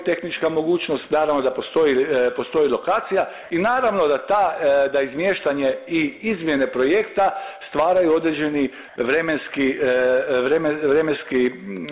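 Comfort noise in place of the background, 8.88 to 8.96 s: the background becomes flat, featureless hiss, shifted about 2 dB, likely from discontinuous transmission.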